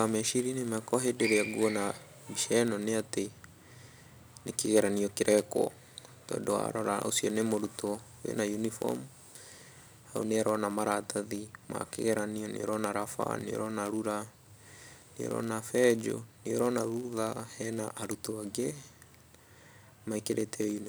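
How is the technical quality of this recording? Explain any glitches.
Not great: a steady buzz runs through the whole speech clip. That's a block size mismatch (padded): each block gets zero-filled gaps, buzzing near 91.5 Hz and slowing things about 0.4%, timbre unchanged.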